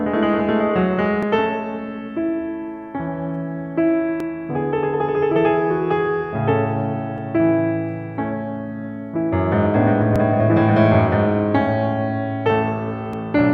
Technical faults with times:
1.23 audio missing between chunks
4.20 audio missing between chunks
7.18 audio missing between chunks
10.16 audio missing between chunks
13.13 audio missing between chunks

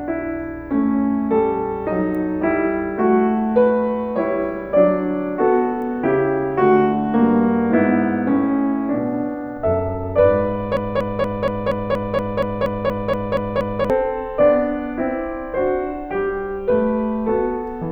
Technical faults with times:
10.77-13.90 broken-record loop

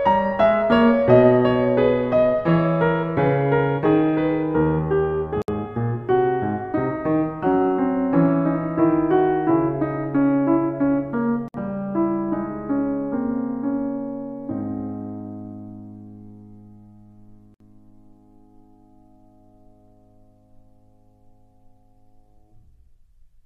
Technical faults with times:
5.42-5.48 gap at a join of encoded pieces
11.48-11.54 gap at a join of encoded pieces
17.54-17.60 gap at a join of encoded pieces

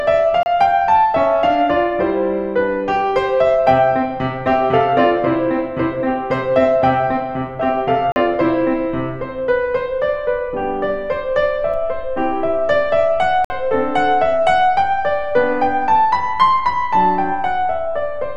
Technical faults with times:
0.43-0.46 block of digital silence
8.12-8.16 block of digital silence
11.74-18.36 DC step
13.45-13.50 block of digital silence

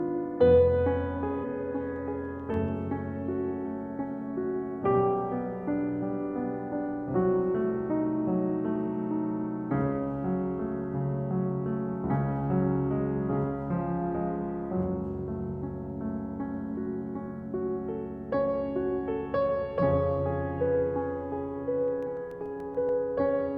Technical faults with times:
1.40-1.45 compressed frames skipped
1.96-2.83 CD scratch ticks
21.88-23.03 CD scratch ticks

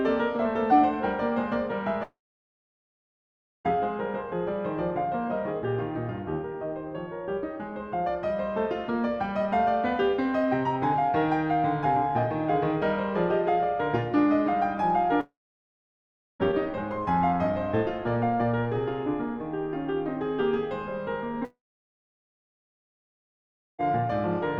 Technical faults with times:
2.03-3.66 long network dropout
15.20-16.41 long network dropout
21.45-23.80 long network dropout

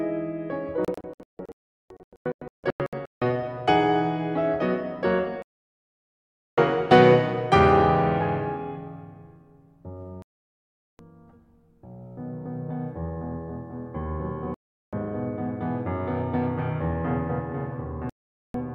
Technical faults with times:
0.85-3.22 digital broadcast dropout
5.42-6.58 digital broadcast dropout
10.22-10.99 digital broadcast dropout
14.54-14.93 digital broadcast dropout
18.09-18.55 digital broadcast dropout

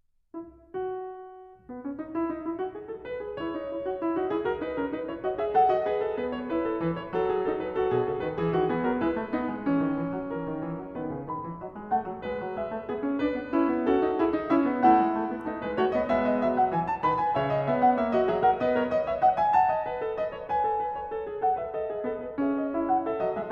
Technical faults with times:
none

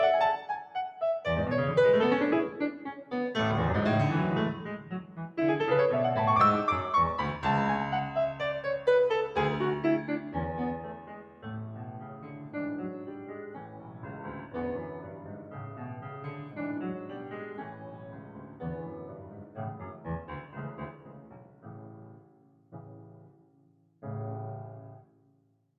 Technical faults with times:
0.00-25.79 noise suppressor applied to music or sounds
11.00-11.44 sound cut by the noise suppressor
11.96-12.54 sound cut by the noise suppressor
13.67-14.02 sound cut by the noise suppressor
15.01-15.56 sound cut by the noise suppressor
17.71-18.61 sound cut by the noise suppressor
19.07-19.57 sound cut by the noise suppressor
20.92-24.02 sound cut by the noise suppressor
25.03-25.74 sound cut by the noise suppressor

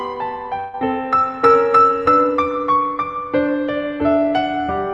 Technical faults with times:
0.59-0.75 burst of packet loss

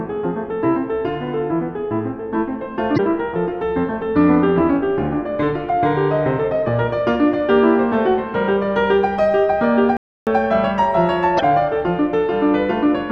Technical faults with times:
2.94-3.00 damaged data in a compressed stream
9.97-10.27 playback stall
11.35-11.41 damaged data in a compressed stream

